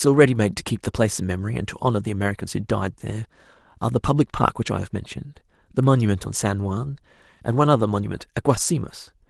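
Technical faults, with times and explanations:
No technical faults turn up in this speech clip. The Opus voice compression is audible as a light coding texture with the band kept wide, which fits a hybrid mode running at around 20 kbps.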